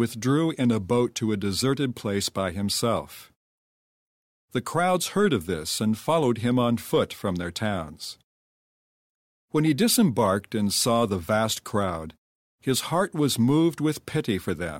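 Speech recording with no audible technical faults.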